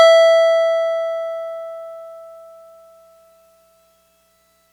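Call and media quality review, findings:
No findings for this music clip in the call and media quality review.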